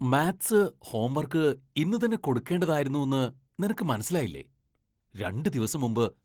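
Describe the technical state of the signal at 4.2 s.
At 4.2 s the speech carries Opus voice compression, present across the whole clip. The lower band is rebuilt from a linear-prediction model with coarsely coded excitation, which makes it plainly hoarse and faintly robotic. A layer above 8 kHz supplies the top end, with content reaching about 20.2 kHz, consistent with roughly 16 kbps hybrid coding in 20 ms frames. Unlike a simple low-pass filter, the high band is present rather than cut.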